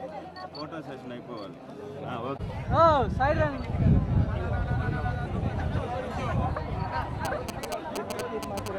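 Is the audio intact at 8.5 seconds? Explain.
No. GSM signalling bursts run from 7.25 to 8.68 s. A nearby 2G phone exchanging signalling sends short groups of radio bursts at about 217 Hz, which the audio circuit rectifies into a galloping dit-dit-dit of short buzzes, roughly 5 dB below the signal.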